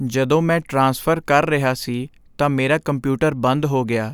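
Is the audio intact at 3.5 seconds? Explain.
Yes, the speech at 3.5 seconds is intact, with no fault at that moment.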